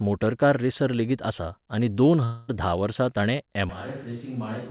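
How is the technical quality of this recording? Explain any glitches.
The recording has two clear glitches, and it sounds band-limited throughout. Nothing is heard above 4 kHz, which fits a G.711 A-law call path at 64 kbps.

From 2.24 to 2.5 s there is a long network dropout. About 240 ms of audio likely never arrived. The receiver fills the gap by extending the last sound as a fading buzz or hiss. No silent stretch is left. Speech then resumes without the lost part.

At 3.69 s the sound switches abruptly to a distant microphone and stays that way to the end. The close signal was likely lost. The audio turns roomy and hollow with less bass. The level falls by about 10 dB, and room noise sits about 30 dB below the speech.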